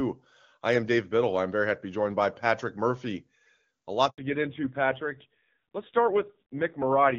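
Speech, carried at first over the AMR wideband (HD Voice) codec with little or no audible codec damage. At 4.10 s a handover gap cuts the sound for 80 ms, until 4.18 s. No frames arrived while the call switched networks. From 4.18 s to the end, a fallback to narrowband removes everything above 4 kHz. The voice turns dull and rough, which fits a drop to AMR-NB at around 5.9 kbit/s.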